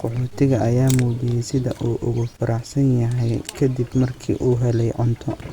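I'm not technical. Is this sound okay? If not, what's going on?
Yes, nothing wrong turns up anywhere in this speech recording, so there's nothing to fix.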